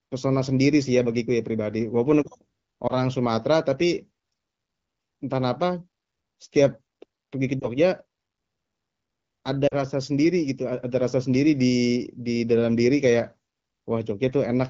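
Lost AMR speech frames occur at 2.88–2.93 s, 7.60–7.68 s and 9.67–9.74 s. Where radio errors made frames fail their checksum, the decoder repeated the last good pitch and vocal-tract settings with falling gain. The first two gaps sound like a brief warble or dip, and the 9.67 s gap drops toward near silence; each looks like a smeared, fading patch of frozen harmonics. The 9.67 s gap fits two consecutive frames. The surrounding wideband audio fits AMR-WB at about 12.65 kbit/s.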